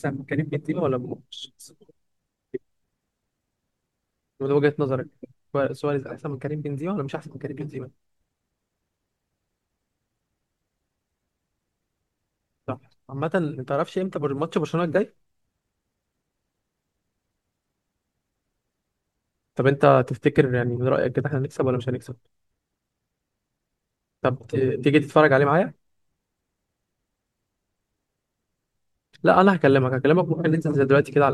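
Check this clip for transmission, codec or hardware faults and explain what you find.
No faults detected here.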